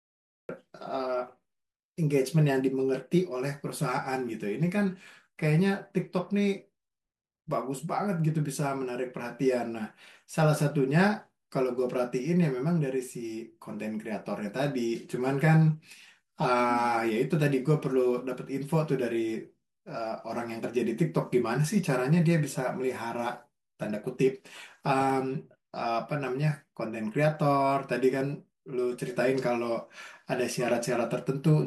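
The recording began late, leaving digital silence until 0.49 s, where a cut-off start drops in mid-sound, with the speech arriving abruptly without any natural attack.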